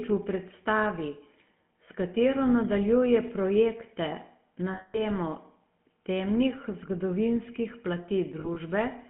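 From the start, the speech carries the GSM full-rate codec. The line passes only about 150 Hz to 3.4 kHz, so it sounds narrow and boxy. The codec rebuilds the voice from a vocal-tract model driven by coarse, regularly spaced pulses. That gives a buzzy, gravelly roughness, and here it is plainly audible. The overall quality fits a 13 kbps GSM stream.

From 4.74 to 5.02 s come lost GSM frames. About 200 ms of audio is missing. The decoder keeps repeating the last good frame. The sound freezes into a rough, metallic ring before speech returns.

From 8.40 to 8.57 s there are more lost GSM frames. About 60 ms in total goes missing, scattered across 160 ms. The longest gap is only a few tens of milliseconds. Each gap is briefly patched with a repeated frame. The result is brief, rough, metallic rings.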